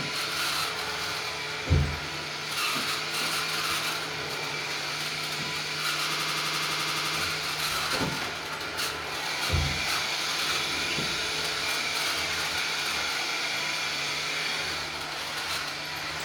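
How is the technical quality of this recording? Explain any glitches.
The recording has one clear glitch, a system hang loop. From 6.14 to 7.17 s, one 85 ms slice of sound repeats exactly twelve times. The system stalled while the audio hardware kept replaying the same buffer, which fits a 4096-sample buffer. It comes across as a rapid machine-gun stutter at about 11.7 Hz, and then the sound resumes with essentially nothing skipped.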